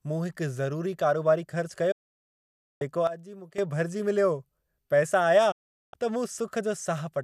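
Twice in this speech recording the receiver stopped getting usable digital frames, whether through signal loss or failed checksums, and muted until clean frames returned. This is a digital broadcast dropout: the sound fades out over about 8 ms, leaving a silent hole from 1.91 to 2.82 s and again from 5.51 to 5.94 s, roughly 0.89 s and 0.41 s of programme that are simply gone rather than delayed. In between, the digital gain was likely switched in a single step with no ramp, producing a sudden gain jump. At 3.07 s the speech and the background noise drop together by about 12 dB, then step back up at 3.58 s, an abrupt change in loudness with no natural transition.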